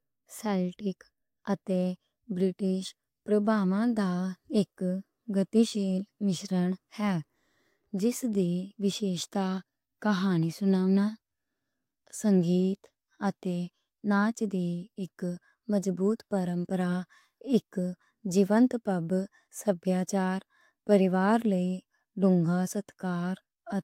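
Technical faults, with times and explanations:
No technical faults can be heard in this speech recording. Nothing in it calls for a time mark or an explanation.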